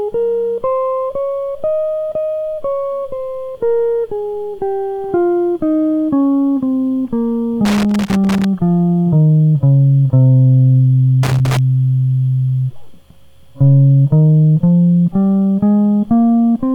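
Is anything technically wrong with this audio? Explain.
Yes. The music has loose connector crackle twice, from 7.65 to 8.45 s and from 11.23 to 11.59 s. A worn or dirty contact is making and breaking as it shifts. That chops the signal on and off. The result is an irregular burst of scratchy crackle.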